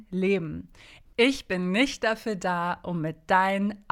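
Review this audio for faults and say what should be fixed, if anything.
Nothing to fix: no faults were found anywhere in the speech clip.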